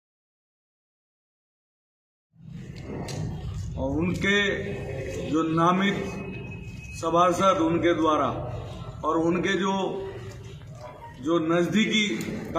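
No technical faults can be heard in this audio.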